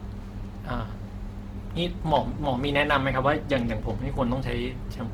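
Adaptive stream at a lower bitrate, from 1.52 s to the end: the stream switches abruptly, with no gap, to a lower-quality version of the speech. Codec artefacts rise, which fits a drop from 64 to 16 kbit/s Opus.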